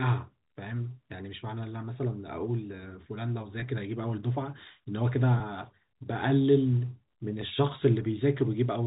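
A speech recording with two brief buzzy holds, from 3.60 to 3.62 s and from 5.38 to 5.40 s, where the sound freezes on one repeated tone for about 20 ms before carrying on. This is packet loss with pitch repetition: each gap fits a single lost 20 ms packet, and the receiver filled it by looping the last pitch period. The audio comes through G.711 telephone coding, which limits it to below 4 kHz.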